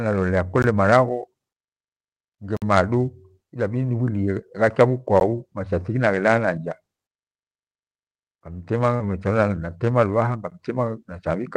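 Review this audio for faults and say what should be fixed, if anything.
Clicks and dropouts at 0.62 s, 2.57–2.62 s, 5.20 s and 10.50 s are a block of digital silence. The three brief ones sound like ticks, and the 53 ms one at 2.57 s is an audible hole. In each, the sound drops abruptly to silence and returns without a fade. To prevent it, give the audio thread enough buffer headroom and guard against invalid values so the output is always filled on time.

From 8.96 to 9.01 s there is a short smear where the sound briefly blurs. This is short concealed packet loss: 40 ms of audio arrived too late for the decoder. The receiver filled the gap by extending the preceding sound and then crossfaded back into the real signal. To prevent it, improve network stability and size the jitter buffer so late packets are still decoded in time.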